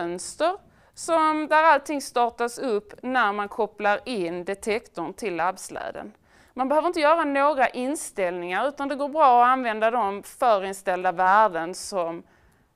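No technical faults are audible anywhere in the audio.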